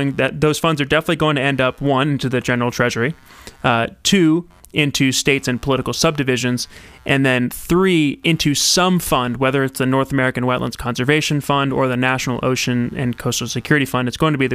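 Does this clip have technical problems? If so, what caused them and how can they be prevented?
Yes. Computer activity noise runs through the whole speech clip. It is a faint buzzing chirp, pulsing around a hundred times a second, roughly 40 dB below the speech. Processor and graphics load disturb the shared ground. An external interface with ground isolation prevents it.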